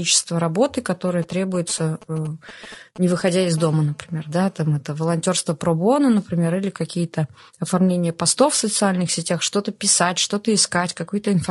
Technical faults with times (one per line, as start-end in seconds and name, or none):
0.00-11.51 low-delay AAC compression
1.08-3.59 GSM signalling bursts
3.59-4.74 GSM phone buzz